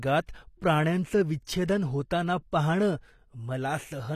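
Speech clip with plainly audible codec damage throughout, likely from HE-AAC compression at a low rate consistent with about 24 kbps. The treble is rebuilt by spectral band replication rather than coded directly, so sibilants sound gritty and metallic, and nothing remains above 14.9 kHz. There is also pre-echo from 1.65 to 1.68 s: quantisation noise spread across the transform block leaks about 32 ms ahead of a sharp attack, so a short hiss precedes it and the onset sounds smeared.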